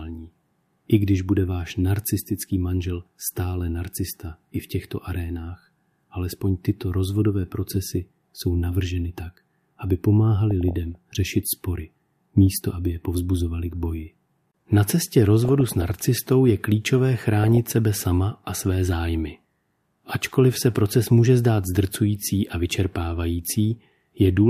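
Burbling breaks over the speech from 10.51 to 10.95 s after "jsou navrženy tak aby", from 15.45 to 16.04 s before "je klíčové", and from 17.37 to 17.69 s before "sebe sama a své". This is DAB burbling: around half a percent of bits arrive corrupted, slip past error correction, and put short blips of noise into individual MP2 sub-bands.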